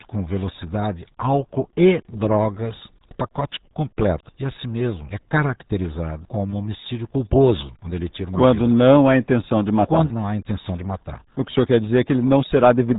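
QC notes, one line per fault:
Throughout: RealAudio 14.4 codec, speech heavily muffled and gargly from very low-bitrate coding, likely an 8 kbit/s stream; spectrogram shows nothing above 3.8 kHz, smeared formants.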